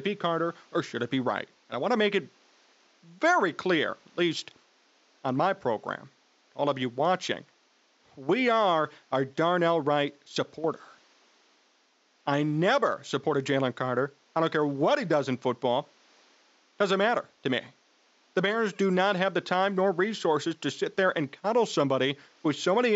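Listening through the speech turned up nothing that stood out, with only the room's own background noise sitting well beneath the voice.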